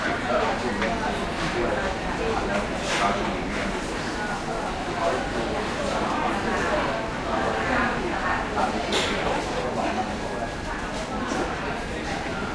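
No technical faults are audible.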